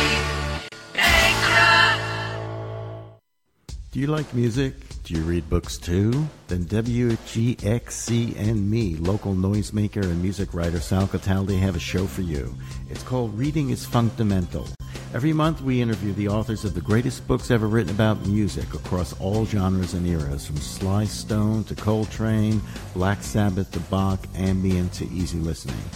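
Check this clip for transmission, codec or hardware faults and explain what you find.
Two faults stand out, both the same kind. A gap at a join of encoded pieces occurs at 0.68 s, about 34 ms long, and at 14.75 s, about 48 ms. Separately encoded pieces were joined untrimmed, leaving encoder delay and padding. The sound drops to silence with smeared edges, then resumes where it stopped.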